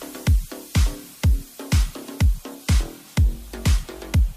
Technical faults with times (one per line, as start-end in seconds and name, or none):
none